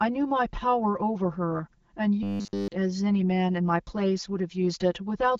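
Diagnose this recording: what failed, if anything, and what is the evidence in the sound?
Channel delay (comb filtering) at the summing stage runs throughout: one channel about 5 ms late cancels against the other, leaving notches from roughly 100 Hz and a hollow tone.

From 2.23 to 2.68 s the speech becomes a rigid metallic buzz at 100 Hz, robotic sound from repeated short buffers, likely a driver or buffer stage replaying a 10 ms block.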